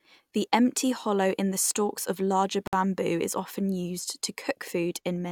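A gap at a join of encoded pieces opens at 2.67 s and lasts about 56 ms, to 2.73 s. The speech was encoded in separate pieces and joined untrimmed, so encoder delay and end padding leave a silence with smeared edges before the speech resumes where it stopped.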